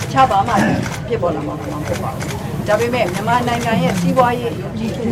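From 1.40 s to 4.78 s there is digital radio blending to analogue. The receiver lost its digital stream, cross-faded over about 0.46 s to the FM broadcast, then returned. Hiss rises roughly 25 dB below the signal, showing as a broadband noise floor on a spectrogram, with no level step in the waveform.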